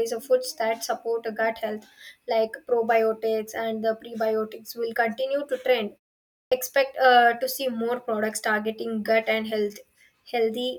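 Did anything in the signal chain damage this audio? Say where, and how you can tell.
Yes. A clipped start after a pause at the playback stage: after a 0.56 s silence, the speech at 6.47 s begins abruptly, missing about 47 ms because the output device was still waking. Muted pauses would drop only background and never eat the first sounds.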